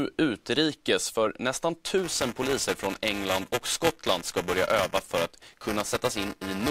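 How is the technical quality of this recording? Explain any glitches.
The recording has one clear fault, buffer tearing, running from 1.98 s to the end. A steady robotic buzz at 375 Hz, which fits a 128-sample buffer, rides on the speech. Writer and playback positions have slipped, so about a tenth of each buffer holds audio a few milliseconds old, with hard joins at both edges.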